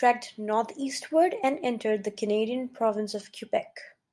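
No technical fault can be heard anywhere in the speech. There is nothing to mark at any point in the recording.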